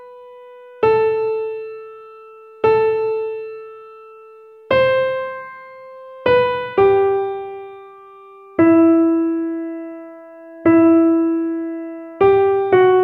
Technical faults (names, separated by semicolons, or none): sample clock jitter